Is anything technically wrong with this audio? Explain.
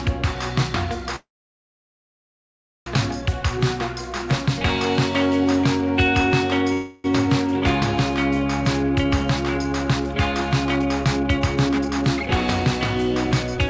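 Yes. There are two kinds of fault, heard over a call path whose content stops at 8 kHz.

Call audio freeze at 1.16–2.88 s and 6.73–7.06 s: the sound stalls, likely because delayed packets left the jitter buffer empty. The receiver stretched the last sound into a brief fading buzz. The first gap lasts 1.7 s, and about 1.6 s of it is dead silence. The second lasts 0.31 s and stays filled throughout. Nothing is lost, because playback resumes where it stopped. On a waveform the first appears as a flat stretch. On a spectrogram the second shows smeared, static bands instead of a blank.

Jitter buffer speed-up at 8.83–10.14 s (111%), 10.65–12.29 s (134%) and 13.14–13.58 s (115%): the receiver cut repeated pitch-period slices to shed surplus buffered delay. In the middle stretch that is roughly half a second. The sound rushes at unchanged pitch. A spectrogram shows compressed timing with unshifted harmonics.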